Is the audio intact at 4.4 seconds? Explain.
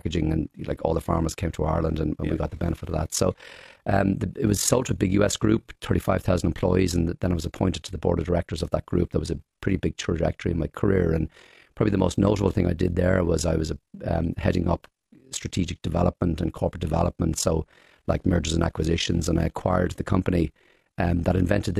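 No. At 4.4 seconds the speech carries overlap-add ripple, present throughout the clip. The audio was split into windowed frames and rejoined with an overlap that does not sum to a steady gain, so the level dips and recovers once per frame, roughly 40 times a second and about 11 dB deep. It sounds like a fast flutter or rough tremolo. A waveform shows a regularly scalloped envelope, and a spectrogram shows evenly spaced vertical striping.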